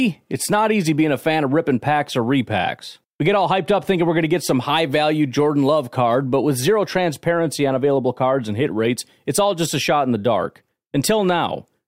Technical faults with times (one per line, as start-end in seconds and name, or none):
none